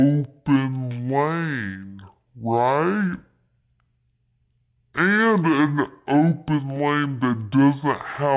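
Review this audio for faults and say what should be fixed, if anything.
Throughout the speech, playback runs at half speed and a full octave low (12 semitones down), which is the signature of a wrong sample rate. The samples are being clocked out at half their capture rate with no conversion, which fits 16 kHz material played as 8 kHz. To prevent it, tag the file with its true rate and resample explicitly whenever the playback device runs at a different rate.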